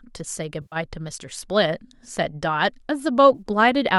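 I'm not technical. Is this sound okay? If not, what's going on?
No. The speech has two short dropouts caused by AAC frame loss with concealment. Chunks of the compressed audio never arrived, so the decoder filled each gap by reusing and reshaping the last good sound. You hear a brief smeared, noisy blur from 0.62 to 0.76 s and a shorter one from 3.35 to 3.42 s. The longer gap fits ten lost 10 ms chunks, which likely points to low-delay AAC compression of the kind used in video calls.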